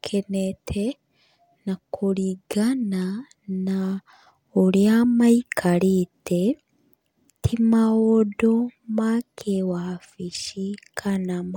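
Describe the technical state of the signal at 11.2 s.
A bit error spike sits at 11.16 s. A flipped bit jolts three samples, peaking near about -26 dBFS, giving one sharp broadband tick.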